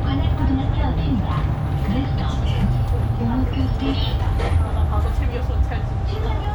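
From 0.82 s to about 6.44 s there's a regular click roughly every 1.12 s, around seven in all, that sounds like clock drift buffer slips. Likely two unsynchronised clocks about 700 ppm apart, dropping or repeating a few dozen samples per slip.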